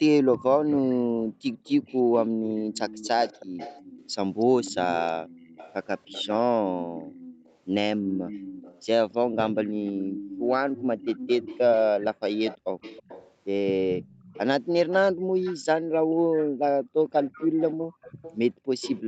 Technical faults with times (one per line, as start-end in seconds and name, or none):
0.34-19.01 echo leak
1.03-1.44 background gated by the echo canceller
8.02-8.26 background gated by the echo canceller
15.14-16.15 background gated by the echo canceller
17.76-18.69 background gated by the echo canceller